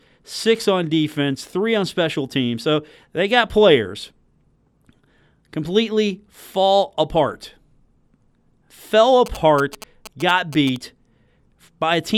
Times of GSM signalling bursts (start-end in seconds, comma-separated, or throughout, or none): 9.26-10.77